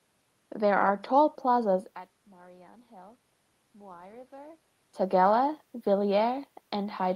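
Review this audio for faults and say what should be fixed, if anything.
Nothing needs fixing: the room noise, the level shifts near 1.5 s and 4.5 s as the talker moves, and the call codec's band limit are all expected.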